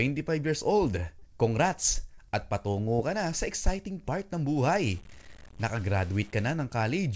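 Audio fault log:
1.19–1.24 s and 2.14–2.20 s, short concealed packet loss: just after "years old", then again a second later, roughly 30 ms of audio went missing and was patched by extending the preceding sound. Each patch is heard as a brief smear before the decoder blends back into real audio.
4.62–6.53 s, low bit depth without dither: after "sa exciting part ng" the sound turns grainy, with distortion that tracks the signal and sits roughly 25 dB below it. The likely cause is truncation to about 7 bits without dither, so quieter passages sound rougher.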